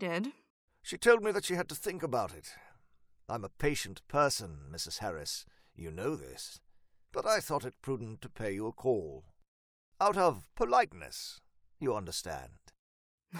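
A speech recording with no technical faults to report. Nothing in it points to a fault in capture, processing or playback.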